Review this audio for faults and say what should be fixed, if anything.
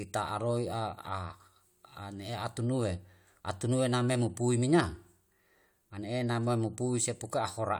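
Nothing here needs fixing; I didn't hear any technical faults anywhere in the recording.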